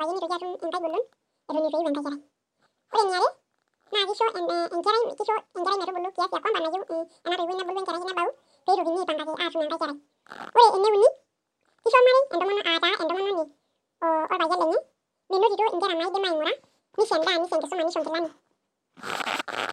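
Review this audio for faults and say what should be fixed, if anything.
Audio read two samples at a time (double speed) affects the whole clip. The speech plays twice as fast and 12 semitones higher because each pair of samples is consumed as one frame. Unlike a simple sample-rate mismatch, skipped samples fold any strong content above a quarter of the sample rate back down. Prevent it by making the reader's channel count and sample width match the stream's actual format.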